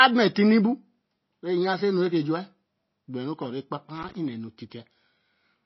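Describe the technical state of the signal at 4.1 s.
At 4.1 s the signal is inside a burst of loose connector crackle running from 3.95 to 4.15 s. A contact making and breaking chops the signal into an irregular scratchy burst, which shows as jagged spikes on the waveform and broadband vertical streaks on a spectrogram. Underneath, the audio is watery and swirly, with plainly audible codec damage and nothing above 5.8 kHz. That points to MP3 compression, likely at a low bitrate around 24 kbps, and shows as a hard ceiling with flickering, patchy detail on a spectrogram.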